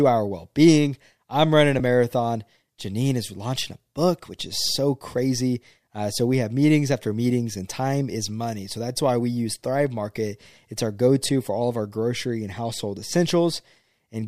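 At 1.79 s, between "being I'm running a" and "a marathon", the speech is briefly replaced by a short burst of smeared, noisy texture about 7.5 ms long, which fits a single lost LE Audio frame. At 11.27 s, after "our go" and before "for all of our", a similar smear lasts about 15 ms, pointing to two lost frames. The LC3 decoder fills each gap by repeating the last spectrum with randomised signs. A clean dropout would leave silence and a clipped edge would give a sharp click, but here the gap is filled with a brief hiss-like blur that keeps the surrounding tone colour. The light lossy compression across the clip sits underneath these events.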